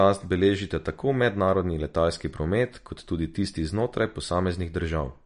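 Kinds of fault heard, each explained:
MP3 compression: The speech was likely squeezed through an MP3 encoder starved of bits, the kind of damage that fits a bitrate somewhere under 50 kbps. To save data it discarded everything above 10.6 kHz and dropped quiet frequency lines that then flicker in and out between frames. The result is plainly audible across the whole clip: a dull top end with no air above 10.6 kHz, and a watery, swirling texture clinging to the sound, especially on s sounds.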